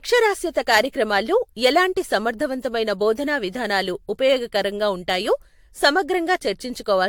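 Repeated lossy encoding, most likely around five AAC-LC passes at bitrates near 96 kbit/s, runs through the whole speech clip. This is generation loss. Each pass quantised the signal again on a shifted frame grid, so the errors piled up. Nothing remains above 19.2 kHz, and the speech sounds swirly and hollow with smeared consonant attacks, more degraded than a single encode at that rate would leave it.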